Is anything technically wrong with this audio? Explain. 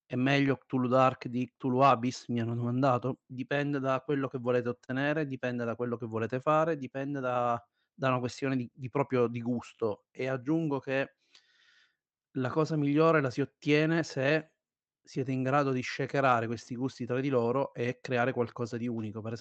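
Yes. The sender's audio clock runs roughly 3 percent slower than the receiver's. This is clock drift between sender and receiver, so the jitter buffer keeps draining and the receiver must keep stretching the speech to stay fed, which gives a faintly uneven, dragging pace across the whole clip.

From 0.08 s to 19.08 s there are repeated timing corrections. The receiver inserts small repeated pieces, all in the same direction, so playback runs at about 98 percent speed and adds roughly 0.4 s overall. Each is small, noticeable only as a slight hiccup or unsteadiness in tempo.

At 4.85 to 4.90 s there is a short stall from a late packet. The jitter buffer ran empty, so the receiver held the last sound for 32 ms until the packet arrived, then resumed from the same point. Nothing is lost, but one sound lingers with a slight buzzy dip.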